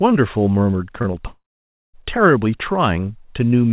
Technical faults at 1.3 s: long network dropout

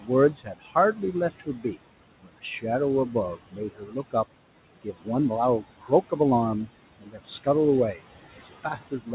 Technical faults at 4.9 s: noise suppressor artifacts; speech cut by the noise suppressor

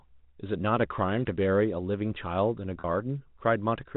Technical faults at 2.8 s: packet loss with pitch repetition

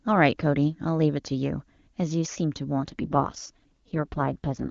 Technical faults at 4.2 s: AMR rate drop

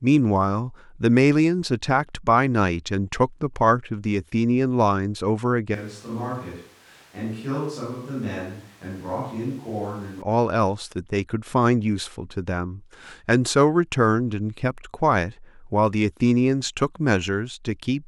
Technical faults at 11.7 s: none

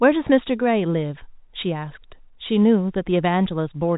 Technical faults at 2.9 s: none

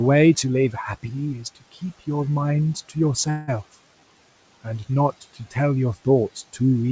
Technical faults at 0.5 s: none

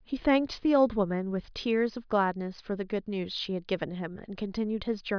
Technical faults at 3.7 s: none

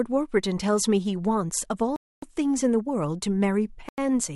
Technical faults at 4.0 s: Bluetooth stall

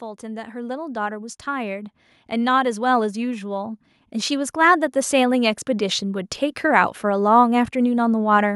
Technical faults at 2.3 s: automatic gain rising

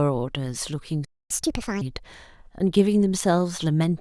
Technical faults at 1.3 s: playback stall; catch-up at higher speed

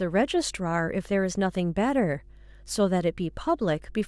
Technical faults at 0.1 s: mains hum

